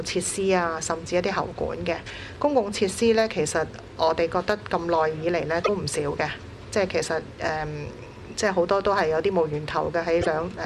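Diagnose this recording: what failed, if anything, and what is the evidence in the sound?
Two short glitches break into the sound, one from 5.61 to 5.69 s and another from 10.18 to 10.27 s, each lasting under a tenth of a second. This is damaged data in a compressed stream, a failure at the codec stage. Corrupted bytes in the encoded file gave the decoder frames it could not parse correctly, so it misread or dropped them until it found the next valid frame header and resynchronised.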